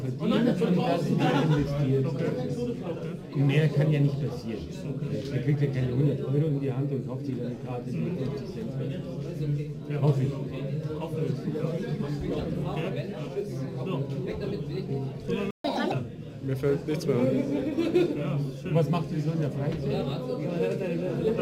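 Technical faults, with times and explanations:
15.51 to 15.64 s, playback stall: the sound cuts out in mid-flow for about 136 ms, leaving a hard gap of silence before it resumes. Output stopped until the player recovered, most likely because its buffer ran dry or its playback thread was briefly blocked.
15.64 to 15.92 s, catch-up at higher speed: right after the gap the sound rushes forward at 1.5 times normal speed, pitched up by roughly seven semitones, then settles back. The player is resampling its backlog faster to recover the time lost in the stall.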